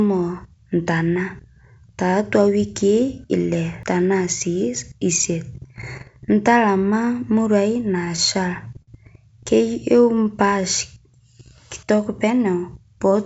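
Right at 3.83 s there's a CD skip: a tiny tick, a mute of only a couple of milliseconds, and then the sound just carries on from somewhere else on the disc. That's the laser getting knocked or tripping on a flaw and landing on a different turn of the spiral, so the audio jumps rather than stopping. It's easy to miss because the dropout is so short, but the discontinuity in what follows gives it away.

From 8.05 to 8.89 s you get repeated stalls, a proper stutter. The packets were arriving late, so the jitter buffer kept running dry, six times in under a second. Each time, the receiver stretched out the last bit of sound to cover the hole, about 101 ms of fill in total, with the longest wait around 53 ms. Nothing actually goes missing, but that stretch drags and catches, with roughly an eighth of it being made-up continuation.

Then at 10.02 to 10.62 s there's a jitter buffer slow-down. 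The buffer was low, so the receiver bought itself some reserve by repeating single pitch periods and bits of pauses over and over, adding about 46 ms. The speech plays at about 94% speed while the pitch stays put, so sounds come out a little drawn-out and lazy.

Finally, from 12.95 s to the end there's the opposite, a jitter buffer speed-up. Too much audio had piled up in the buffer, so the receiver trimmed out short pitch-period-sized slices to cut the delay, around 40 ms' worth. The speech runs at about 109% with unchanged pitch and sounds slightly rushed. All of this rides on the normal call path, which tops out at 8 kHz, consistent with G.722.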